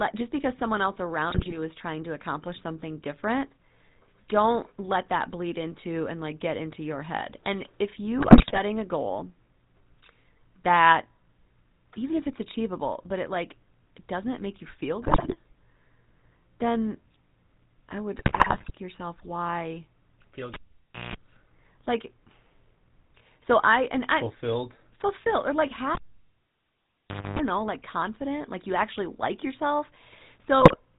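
The whole recording carries the sound of the GSM full-rate codec. The voice is buzzy and gravelly, with nothing above 4 kHz, consistent with the 13 kbps full-rate coder. The vocal tract is modelled by a filter and driven by a sparse, regularly spaced pulse excitation, so the fine structure of the voice is replaced by a coarse, rasping texture that is plainly audible from start to finish.

GSM bit errors break into the speech at 1.30 to 1.58 s, at 8.18 to 8.59 s just before "a goal", at 15.02 to 15.35 s just after "doesn't make you feel", and at 18.16 to 18.71 s just before "yourself why". Corrupted filter, pitch and gain parameters reach the decoder, so individual frames are decoded with a warped spectrum or a sudden jump in level. The result is squawks, pops and gargling. The 18.16 s burst is the longest.

A cable pulled and plugged in interrupts the audio at 20.54 to 21.16 s. There is a pop and about 0.57 s of near silence, then 60 Hz mains buzz lasting about 0.19 s while only the plug tip makes contact, and a second pop as the signal returns. 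A second unplugging at 25.95 to 27.39 s follows the same sequence. This time the dropout lasts about 1.39 s and the buzz is at 50 Hz, for about 0.27 s.

A final GSM bit error burst garbles 30.59 to 30.79 s, in the closing moments of the clip.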